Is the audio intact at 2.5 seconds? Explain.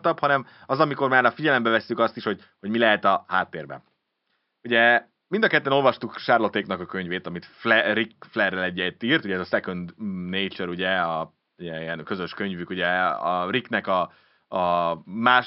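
Yes, the audio is intact at 2.5 seconds, with only the room's own background noise sitting about 52 dB below the speech.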